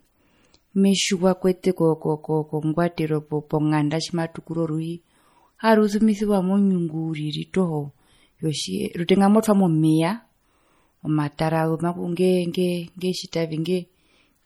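From start to end, the speech carries plainly audible damage, likely from MP3 compression at a low bitrate, which fits about 48 kbps. Weak detail flickers in and out, giving a watery, swirling texture. S sounds chirp metallically.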